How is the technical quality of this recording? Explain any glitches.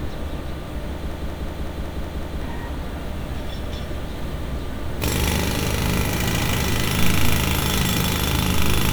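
The recording has one serious glitch. From 1.12 to 2.42 s a system hang loop occurs. Playback froze while the hardware kept replaying one 186 ms buffer (consistent with 8192 samples). It repeats seven times at 5.38 Hz, a machine-gun stutter replacing about a second and a half of audio. On a waveform and spectrogram it shows as identical blocks tiling exactly.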